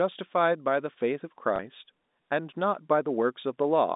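A small blip interrupts the speech from 1.56 to 1.59 s, heard through the narrow G.711 telephone band. This is packet loss with the last packet repeated: about 30 ms of audio went missing, which fits a single 30 ms packet, and the receiver replayed the previous stretch.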